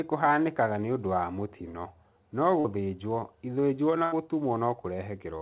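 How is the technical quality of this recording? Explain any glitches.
Two dropouts are audible in this narrowband call recording. Nothing sits above 4 kHz, which points to a G.711-style phone codec at 64 kbps and gives it that muffled telephone top end.

The first glitch, at 2.60 to 2.67 s, is a short concealed packet loss. About 40 ms of audio never arrived in time, so the receiver improvised roughly 42 ms by carrying the last bit of sound forward, then eased back into the real signal. You hear it as a quick smear or little wobble, and whatever fell in that gap is simply gone.

The second, at 4.04 to 4.15 s, is a burst of packet loss, a longer hole. About 80 ms went missing in a run, and the receiver stretched the last sound across roughly 78 ms while fading it down. That comes across as a brief held buzz or fading hiss, then the speech jumps ahead with that stretch cut out, so it feels like a small skip rather than a tick.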